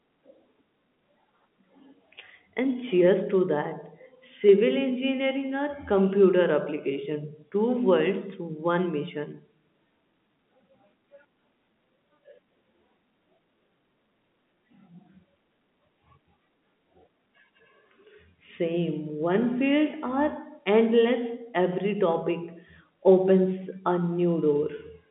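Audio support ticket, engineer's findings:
Nothing to flag on this one: it's ordinary G.711 telephone-band speech, with the line band running roughly 150 Hz to 3.6 kHz and nothing above about 3.8 kHz, just as a phone call should sound.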